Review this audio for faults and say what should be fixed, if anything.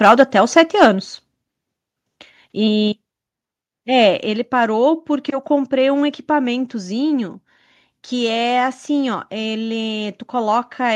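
The call software likely lowered the microphone's input volume in a single step at 4.26 s, a microphone volume stepped down fault. The speech and the background beneath it fall together by about 4 dB at that instant and remain quieter afterwards. To prevent it, turn off automatic microphone gain adjustment in the call software and set the input level manually with enough headroom.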